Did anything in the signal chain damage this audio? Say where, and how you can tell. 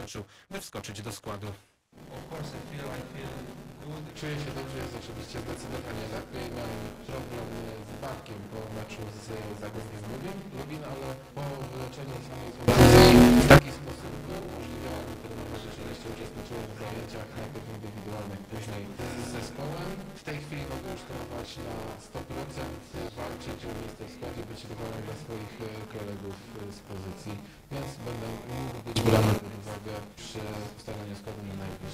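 Yes. A constant robotic buzz at 200 Hz runs through the whole clip, present only while sound is playing and absent in the gaps. That points to buffer tearing at the driver or buffer stage. The writer and the hardware reader of the ring buffer have drifted so they cross inside each period, which fits periods of about 5 ms. Roughly a fifth of every period is stale audio from about 20 ms earlier, spliced in with hard edges on both sides.

Twice the level leaps abruptly, with the background noise rising by the same amount as the sound. From 12.68 to 13.57 s it is about 24 dB louder, and from 28.96 to 29.38 s about 18 dB louder. Each time it drops back just as suddenly. Because noise and signal move together, this is a likely sudden gain jump in the digital processing or driver stage: a gain setting or bit shift applied instantly, with no ramp.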